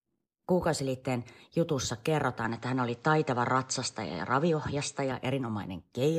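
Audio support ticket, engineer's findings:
Speech dulls from 2.44 s to 5.12 s, nothing above 8.3 kHz, new faint noise floor, no gap at the switch. Likely an input switched to a poorer device, narrower band, then back.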